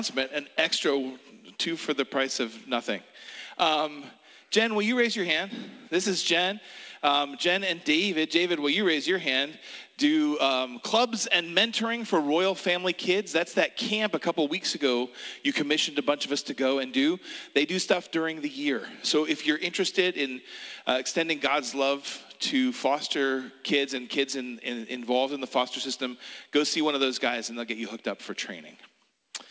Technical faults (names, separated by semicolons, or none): none